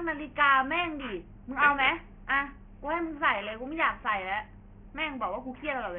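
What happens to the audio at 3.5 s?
The sample rate was cut without an anti-aliasing filter, which points to a drop to about 6 kHz, so content above 3 kHz folds back as aliasing, throughout the clip including 3.5 s. Sibilants turn gritty and metallic, with false tones roughly 10 dB below the speech.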